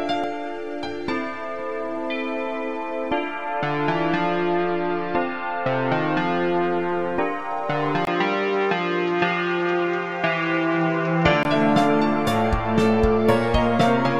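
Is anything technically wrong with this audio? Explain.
Yes. From 8.05 to 11.45 s the sound turns duller: nothing above 7.6 kHz gets through, and a new background noise appears, roughly 30 dB below the signal. A short silence of about 20 ms marks the switch at 8.05 s. The overall level stays about the same. This is likely an input switched to a poorer device, a change to a narrower-band microphone path with its own noise. A simple low-pass filter or codec bandwidth drop would not bring in the fresh noise floor or the gap at the changeover. Full bandwidth returns at 11.45 s.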